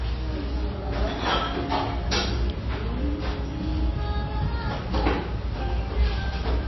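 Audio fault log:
Throughout: MP3 compression, likely. Nothing above 5.8 kHz, and sparse spectral lines flicker frame to frame, giving watery, swirly smearing, which fits a roughly 24 kbps encode.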